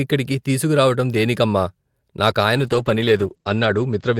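From 2.56 s to the end, a call bitrate drop sets in: the encoder falls from 64 to 11 kbps, bottoming out for about 1.05 s, and audio bandwidth shrinks from 20 kHz to 8 kHz. The speech turns muffled and rough, and a spectrogram shows energy abruptly cut off above 8 kHz.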